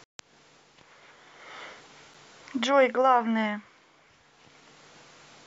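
At 2.14 s, a gap between stream segments: the timestamps of two adjoining segments, which points to segments about 2 s long, fail to meet, and the player fills the hole with silence. The speech breaks for about 8 ms with hard edges, adding about 6 ms of time, heard as a tiny click-like dropout, though nothing is lost.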